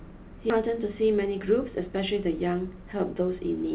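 At 0.50 to 0.52 s the speech jumps forward in a skip ahead: roughly 0.7 s of audio was discarded while later audio was already queued, and nothing fills the cut. The two sides are butted together, so the listener hears an abrupt splice with material missing.

From 2.47 to 3.37 s a jitter buffer speed-up plays the speech at 109% speed with unchanged pitch. Short pitch-period slices, about a tenth of a second in total, are removed in succession to drain excess buffered delay, and the delivery sounds slightly hurried. Throughout, the narrowband call path cuts everything above 4 kHz, which fits G.711 mu-law.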